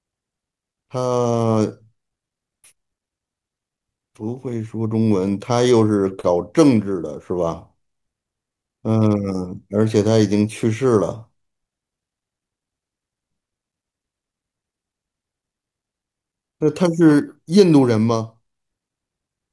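No technical faults can be heard anywhere in the speech.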